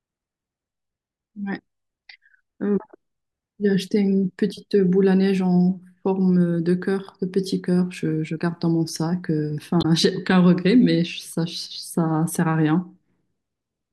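A speech clip with damaged data in a compressed stream from 9.78 to 9.85 s. Corrupted bytes made the decoder misread frames and lose sync, producing a brief glitch.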